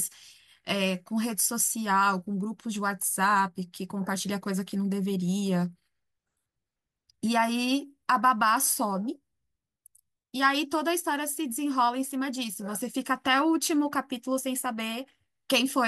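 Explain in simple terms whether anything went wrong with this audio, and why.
Nothing went wrong with the recording as a signal: the speech comes through steady and intact, with no breaks, jumps or sudden changes anywhere along it.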